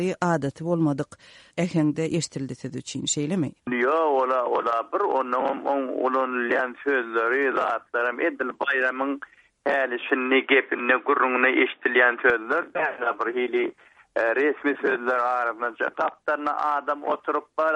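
At 10.10 s the sound abruptly turns dull and boxy, with nothing above 3.8 kHz, and stays that way until 12.30 s, when the full band snaps back. There's no gap at the changeover, but the level shifts by roughly 5 dB and a faint new noise floor sits well under the signal. That points to an input switched to a poorer device, likely a fallback microphone or a headset's call profile, before the original input came back.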